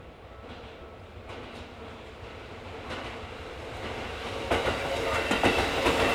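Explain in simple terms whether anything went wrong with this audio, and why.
Nothing went wrong here: the recording comes through as a steady, intact signal with no technical problems to point to.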